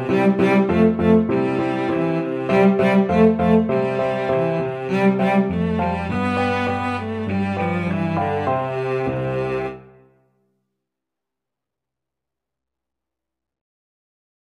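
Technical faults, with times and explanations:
6.13 s, compressed frames skipped: the audio jumps ahead, losing roughly 20 ms, which fits a single missing or rejected frame of about 23 ms.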